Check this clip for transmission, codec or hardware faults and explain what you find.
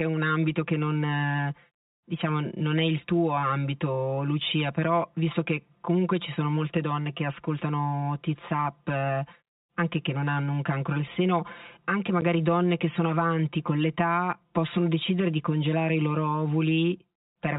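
Two faults are audible: channel delay throughout, and one packet loss filled with silence. The telephone-band G.711 coding itself sounds clean.

Channel delay (comb filtering) runs the whole clip. One channel lags by around 5 ms before mono summing, cancelling evenly spaced frequencies from roughly 100 Hz. The speech sounds hollow and phasey.

Packet loss filled with silence occurs at 12.21 s, between "cancro al seno anche" and "donne che sono avanti". A 10 ms hole, which fits one lost packet, leaves a hard-edged gap.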